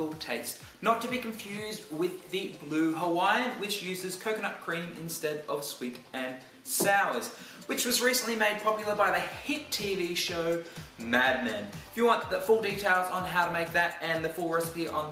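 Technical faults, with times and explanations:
No technical faults, with times and explanations, to report.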